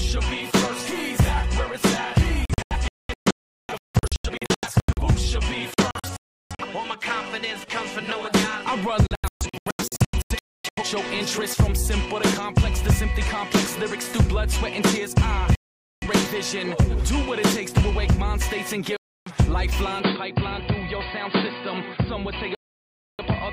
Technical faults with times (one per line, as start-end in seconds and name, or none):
2.45-5.02 digital broadcast dropout
5.74-6.65 digital broadcast dropout
9.07-10.83 digital broadcast dropout
15.55-16.07 digital broadcast dropout
18.97-19.32 digital broadcast dropout
20.00-23.53 input switched to a poorer device
22.55-23.24 digital broadcast dropout